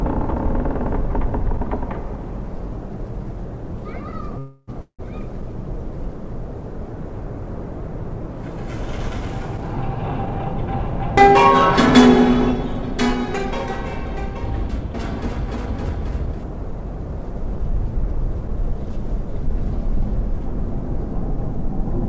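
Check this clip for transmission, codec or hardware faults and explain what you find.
Two kinds of fault appear: a pair of call audio freezes near 4.4 s and three stretches of jitter buffer speed-up between 10 and 19 s. Above them the spectrum stops at 8 kHz, which fits a G.722 call path at 64 kbps.

Call audio freeze, 4.39–4.70 s and 4.82–5.01 s: delayed packets likely emptied the jitter buffer. The receiver stretched the last sound into a fading buzz lasting about 0.29 s and 0.17 s, and the second freeze ends in 0.1 s of silence. On a spectrogram these show as smeared, flat bands, with a blank gap in the second.

Jitter buffer speed-up, 10.26–10.80 s, 12.67–14.31 s and 15.42–18.76 s: the buffer held surplus audio, so the receiver trimmed pitch-period slices. Playback runs at 106%, 103% and 107% of normal speed, removing roughly 40 ms, 50 ms and 200 ms. The first and last stretches sound hurried but keep their pitch, and the waveform looks compressed in time.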